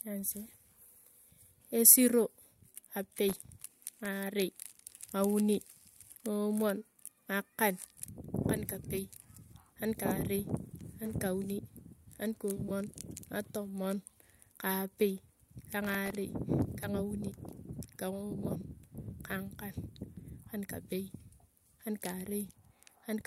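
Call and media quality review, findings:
Processor overload crackle, 3.29–4.05 s: gritty tearing over the speech, dozens of missed deadlines in a row, each repeating a sliver of old audio. The grain points to very short buffers, under a millisecond. Probable component: audio processing thread starved of CPU.

Processor overload crackle, 15.85–16.10 s, right after "ka apei ka": same texture, shorter, around ten misses. Not packet loss, which leaves longer dropouts or smeared concealment rather than this fine, hard-edged crackle.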